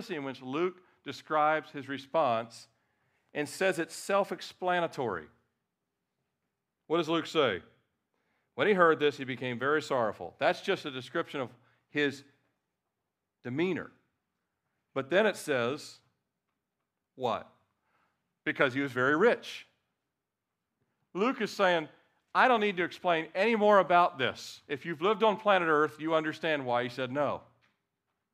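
No technical faults can be heard anywhere in the recording.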